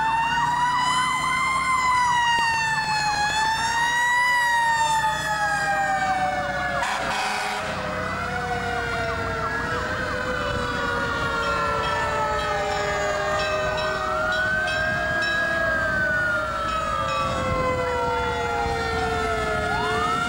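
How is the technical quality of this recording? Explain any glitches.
The recording has one fault: a burst of CD scratch ticks from 2.39 to 3.45 s. A scratch wipes out more data than error correction can restore on each disc revolution, so the player patches or mutes those samples, giving eight regular ticks, the longest only a few milliseconds.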